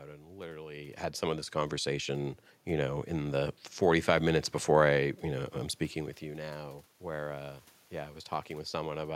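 A speech recording in which, after "had some of this" at 1.52 s, the voice and the room noise behind it swell together, climbing by about 6 dB over three seconds until 4.52 s, just before "I you know I'm". That joint rise is automatic gain rising: the gain control judged the input too quiet and raised its gain gradually, lifting the background along with the talker, unlike the talker's own level shifts near 0.5 s and 6 s.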